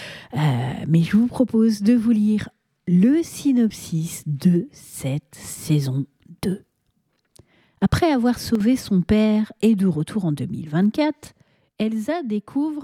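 At 8.55 s the level drops abruptly by about 6 dB for 50 ms, then again from 11.27 s to the end. That's likely one channel dropping out, so the mono sum loses half its level without otherwise changing character.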